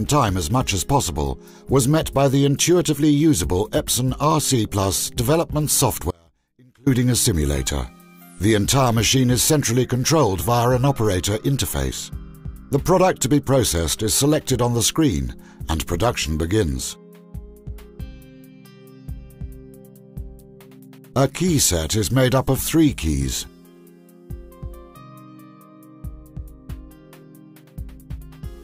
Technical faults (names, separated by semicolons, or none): audio dropout to a faint residue